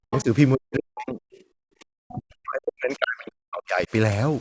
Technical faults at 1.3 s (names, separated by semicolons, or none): speech suppressed in double talk; other side's voice leaking through